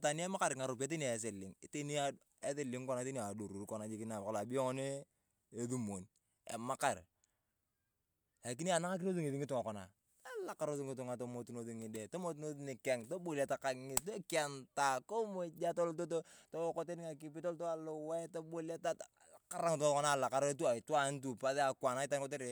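No audible faults in the speech: no dropouts, glitches, distortion or timing disturbances anywhere in the recording.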